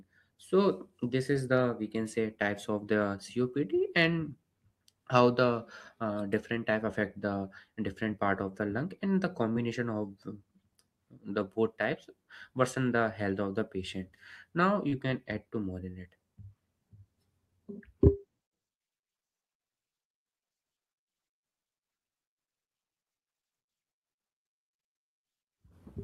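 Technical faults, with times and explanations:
14.89–14.94 s, short concealed packet loss: 20 ms of audio never arrived. The receiver stretched the preceding sound across the gap, leaving a brief smear before "can add to more".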